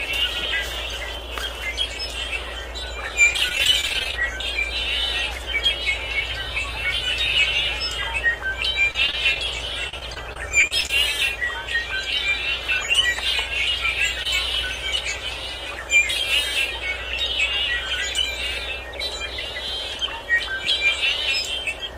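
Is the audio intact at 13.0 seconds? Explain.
Yes, at 13.0 seconds the sound plays through intact, with no audible fault at that moment.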